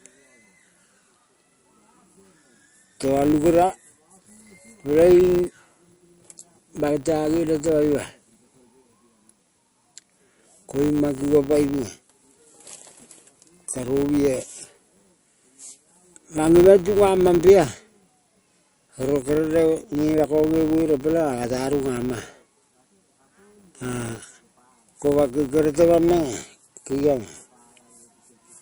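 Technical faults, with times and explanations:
Throughout, MP3 compression: the sound is audibly watery and swirly. The likely cause is a low-bitrate MP3 encode, around 48 kbps, cutting off the treble and dropping weak frequency detail that flickers from frame to frame.
Throughout, filter restarted on every block: a steady 100 Hz buzz rides under the speech and grows louder and softer with it. A filter restarting from silence at each block produces a small transient at every boundary, here 100 times per second.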